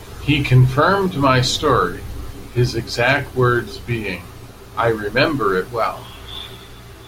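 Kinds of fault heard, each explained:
Mains hum: throughout the clip, a steady low tone at 60 Hz sits under the speech, roughly 25 dB below it, so it stays audible in every pause and thickens the low end beneath the talking. Power-line current has leaked into the signal path, typically through a ground loop between connected equipment or magnetic pickup from a nearby transformer, and because that coupling never lets up, the tone stays constant in pitch and level from start to finish.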